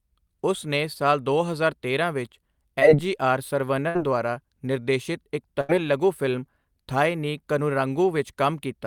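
A speech recording with three dropouts typical of a packet-based call. The first is short concealed packet loss at 2.79 to 2.83 s. Audio failed to arrive in time, so the decoder extended the preceding sound for about 15 ms to cover the hole, then blended back into real audio. About 20 ms of speech is simply gone. It is heard as a brief smear or wobble.

The other two are bursts of packet loss, at 3.89 to 3.97 s and 5.61 to 5.71 s. In each, a longer stretch never arrived in time to play. The receiver held the last sound and faded it down for about 58 ms and then about 79 ms. This gives a short buzz or hiss that dies away. Playback then picks up further on. About 60 ms and 80 ms of speech are missing.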